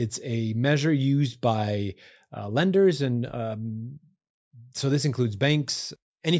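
No technical faults detected.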